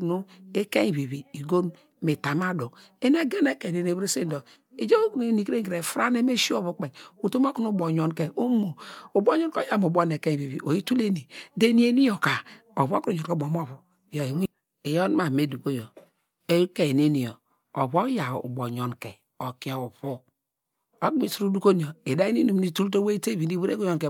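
Speech recording with no technical faults to report.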